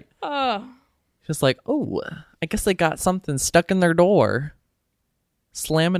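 A speech recording with no audible technical faults anywhere in it.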